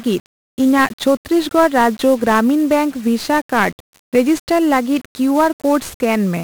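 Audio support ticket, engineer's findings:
1-bit DFPWM compression, throughout the speech. Heavy fuzz and crackle on every syllable, constant broadband hiss burying the treble. Each sample reduced to one up/down bit driving an adaptive level tracker, so it always overshoots or lags the true waveform. Error spreads as loud wideband quantisation noise. Density fits a 48 kbps DFPWM stream. Component: encoder stage upstream of playback.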